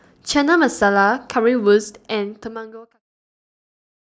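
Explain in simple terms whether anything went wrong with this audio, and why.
Nothing stood out as wrong when listening to this speech recording; the gentle fade-out that starts at about a second and a half and finishes at 3.03 seconds is an ordinary editing touch, not a problem.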